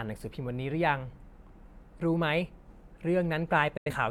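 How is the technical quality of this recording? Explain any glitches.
There's one glitch, a digital broadcast dropout near the end. At 3.77 s the speech fades out over about 8 ms and stays silent until 3.90 s. The receiver muted because frames didn't arrive intact, and roughly 85 ms of audio was lost, which fits a couple of missing frames.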